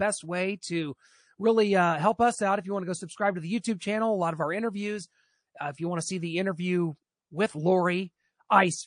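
Throughout the clip, the encoder likely ran short of bits, in a way that fits MP3 compression at a low rate, around 40 kbps. With so little to spend, it lets weak frequency lines flicker on and off between frames. The codec damage is plainly audible: the speech has a watery, swirling texture, s sounds turn metallic and chirpy, and consonant attacks blur.

From 3.61 to 3.64 s, a sharp attack falls late in a transform block, and the encoder never switches to short blocks, so the quantisation noise meant for the loud onset spreads across the whole window, which fits a long block of about 52 ms. That pre-echo appears as a hiss about 16 dB above the quiet before it, smeared roughly 28 ms ahead of the attack, which itself sounds softened.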